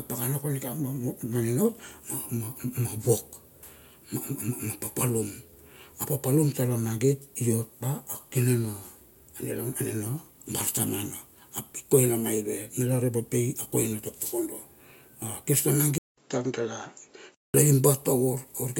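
A speech recording. From 15.98 to 17.54 s, after a 195 ms silence, the sound turns dull, with nothing above 7.6 kHz. A faint new background noise appears, and the overall level stays similar. This is likely an input switched to a poorer device.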